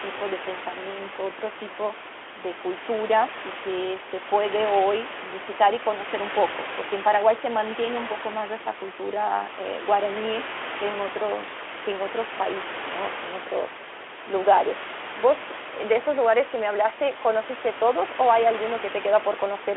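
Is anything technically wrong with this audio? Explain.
No, there is no technical fault here; the room noise sits about 11 dB under the speech, and the Speex path at 18.2 kbps carries the usual 300 Hz to 3.4 kHz telephone band.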